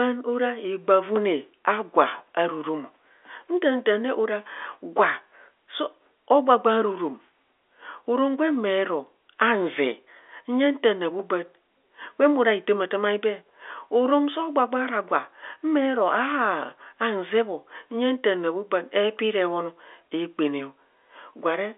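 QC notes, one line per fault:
Nothing to log here, just speech coming over an ordinary G.711 A-law telephone line, with the top end stopping at about 3.7 kHz.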